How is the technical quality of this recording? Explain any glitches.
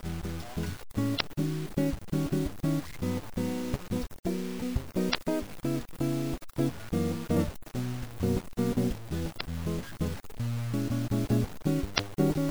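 The technical quality is poor: the music is gritty from start to finish and is broken by five short glitches.

Low bit depth without dither, throughout: grainy distortion that follows the music is most exposed in quiet passages, and sits only around 20 dB below the signal. It likely comes from truncating to about 6 bits with no dither, so the rounding error tracks the waveform instead of forming steady hiss.

Damaged data in a compressed stream, at 1.17–1.21, 5.11–5.15, 7.33–7.37, 9.37–9.41 and 11.95–12.00 s: each is a brief squawk or blip lasting about 44 ms. Corrupted bytes make the decoder misread those frames, lose sync and resume at the next valid frame header.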